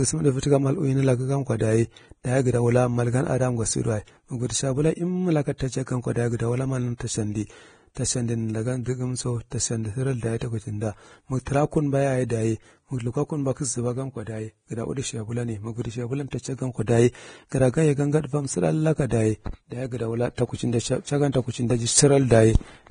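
Throughout the speech there is heavy Vorbis compression damage, likely from low-bitrate encoding around 24 kbps. Nothing remains above 9.7 kHz, and the coarsely quantised upper band turns fine detail into grainy hiss, roughening tonal sounds and blurring consonant onsets.

From 5.58 to 5.60 s, just before "ta chau gan ko", there is pre-echo. A sharp attack late in a transform block lets the coding noise spread backward into the quiet gap, so a brief hiss of about 24 ms leads the onset and softens it.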